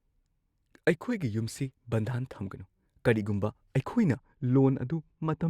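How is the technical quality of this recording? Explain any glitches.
The speech has one fault near the end. From 4.17 s to 5.49 s, de-emphasis was applied wrongly: a treble-cutting filter hit audio that either had no pre-emphasis or had already been de-emphasized, pulling 10 kHz about 13 dB below 1 kHz, so the voice turns dull and muffled.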